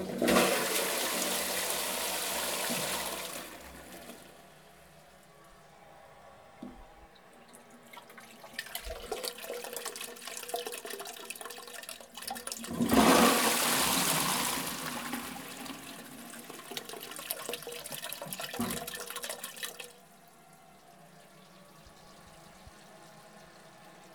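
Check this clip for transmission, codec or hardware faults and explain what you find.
Nothing in the audio points to a transmission, codec or hardware problem.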